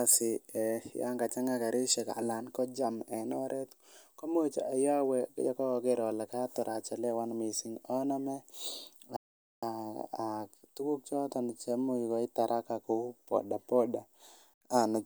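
At 9.16 s the speech stops mid-flow and the output goes silent for 0.46 s before resuming at 9.63 s. This playback stall was likely caused by the player running out of data, or its thread being blocked, until it recovered.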